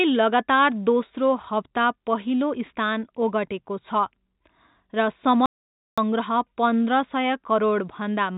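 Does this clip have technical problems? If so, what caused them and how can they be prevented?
Yes. There are three related problems.

Clock drift between sender and receiver runs through the whole clip. The sender's clock appears to run roughly 4% slow compared with the receiver's. The receiver's jitter buffer therefore keeps draining. To stay in step, it must keep stretching the stream. This mismatch is the root of the uneven timing heard across the recording. Prevention: lock both ends to a common clock, or resample adaptively at the receiver.

Repeated timing corrections are heard from 0.11 s to 8.11 s. Playback runs at about 96% of normal speed. The receiver keeps repeating short pieces to fill the gap left by the slow sender. All the edits go the same way, but they are unevenly spaced. Together they add about a third of a second. Each edit is small. Prevention: correct drift with smooth resampling instead of inserting repeated fragments.

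An audio dropout to silence runs from 5.46 s to 5.98 s. The sound cuts out for 518 ms. The gap is silent, with no room tone. Whatever happened in that half second is gone. The likely cause is the jitter buffer running empty as the slow sender fell behind. The audio is band-limited with nothing above 4 kHz, which fits a G.711 call codec. Prevention: enlarge the jitter buffer and fix the clock mismatch.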